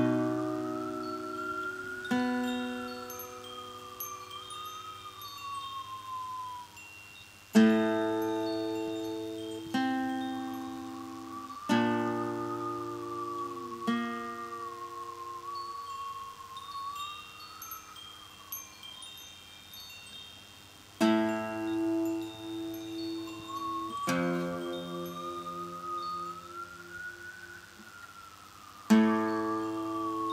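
A DECT cordless phone buzz runs through the whole clip, from start to end. A nearby DECT handset or base station is sending short radio bursts every 10 ms. The audio circuit picks these up and rectifies them, so each burst becomes a small click. At 100 bursts per second, the clicks merge into a steady, thin buzz at 100 Hz, rich in harmonics. It sits well below the main sound, at roughly 25 dB down, but stays constant throughout.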